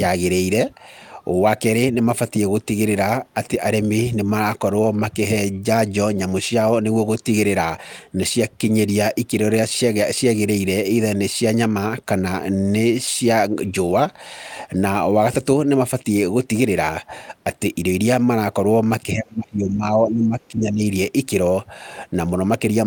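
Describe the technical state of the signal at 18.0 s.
At 18.0 s the speech signal is intact, with no audible technical fault at that moment.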